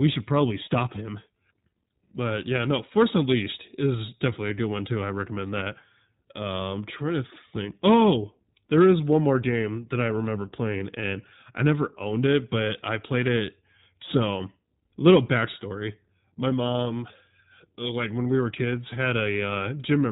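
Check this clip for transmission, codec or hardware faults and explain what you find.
One codec fault runs through the whole speech clip: iLBC coding, plainly audible from start to finish. Nothing above 4 kHz survives, and each short frame's excitation is coded on its own, so the speech is clear but slightly rough and synthetic. The roughness fits iLBC's 15.2 kbps mode with 20 ms frames. A plain 4 kHz low-pass would dull the sound without this grainy, frame-by-frame coding texture.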